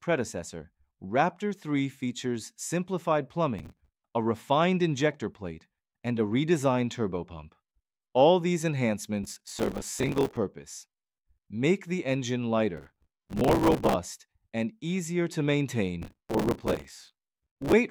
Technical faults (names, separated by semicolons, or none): processor overload crackle